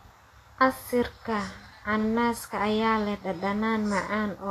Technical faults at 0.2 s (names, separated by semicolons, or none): Vorbis compression